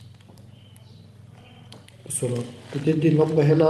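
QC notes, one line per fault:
No faults found; the call path is working as expected, with the top end rolling off near 12 kHz, which fits Opus coding at around 32 kbps.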